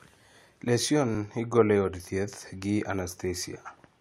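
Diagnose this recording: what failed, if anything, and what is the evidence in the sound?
A single tiny skip at about 1.15 s in this speech, where the waveform jumps because roughly 17 ms of sound is simply missing. The fault sits at the streaming or network stage: an overlap between stream segments. Two adjacent segments carried time stamps that overlapped, and the player trimmed that overlap as if it were duplicated audio, discarding sound that existed only once. A lone event in a 4-second clip fits segments several seconds long, around 6 s.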